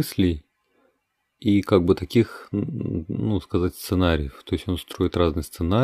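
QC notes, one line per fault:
The speech signal shows no technical fault at any point.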